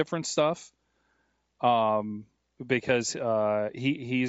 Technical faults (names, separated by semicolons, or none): Bluetooth LC3 compression; lost LE Audio frames